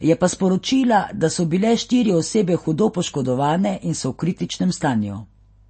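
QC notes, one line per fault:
Throughout: MP3 compression artefacts, plainly audible across the speech. Nothing is heard above about 8.4 kHz, a hard, flat ceiling rather than a gentle roll-off, so sibilants lose their top and sound dull. Weak frequency components drop in and out from frame to frame, leaving a watery, swirling texture on s sounds, and consonant onsets smear. The sound points to a low rate such as 32 kbps, and a starved MP3 encoder is the likely cause. That swirl sets it apart from a plain low-pass filter.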